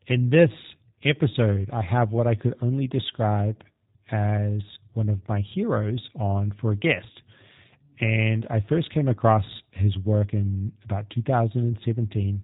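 From start to finish the speech carries G.729 codec damage, and it is plainly audible. Nothing passes above 3.8 kHz, so the sound is dull and narrow. Each short frame is rebuilt from a filter, a pitch predictor and a few pulses. That leaves the speech rough and synthetic, as expected of an 8 kbit/s VoIP link.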